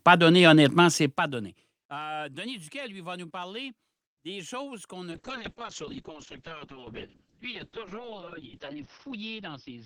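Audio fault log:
5.13–9.86 s, call bitrate drop: the speech loses its top end, with audio bandwidth falling from 20 kHz to 6 kHz, and turns rough and watery as the codec quantizes more coarsely. The sound fits the encoder being pushed from around 48 kbps down to about 6 kbps after the bandwidth estimate fell. It stays at its worst for 3.84 s and does not recover before the clip ends.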